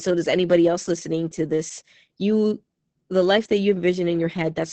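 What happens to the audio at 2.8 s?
Opus voice compression runs through the whole clip, so 2.8 s is affected like every other moment. The SILK linear-prediction coder sends only a coarse excitation, which fits a bitrate near 10 kbps, and the band stops near 8.7 kHz. The speech sounds muffled, hoarse and slightly robotic. A plain low-pass filter would only dull the sound, with none of that roughness.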